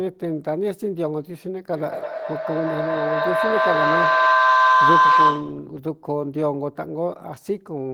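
From 1.75 to 5.73 s a feedback howl builds near 1 kHz, pulsing roughly every fifth of a second and peaking about 9 dB above the speech.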